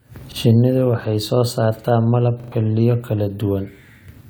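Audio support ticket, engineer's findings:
Repeated buffer in speech: stutters at 0.32 s (one replay) and 2.40–2.52 s (three replays), consistent with a 40 ms playback buffer; underrun re-plays the last block. Waveform shows identical repeated segments with hard seams; roughly 0.14 s lost.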